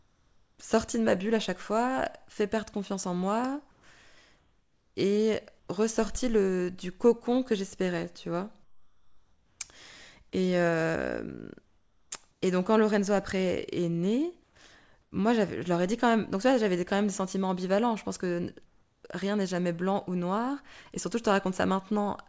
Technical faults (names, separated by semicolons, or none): comfort noise in place of the background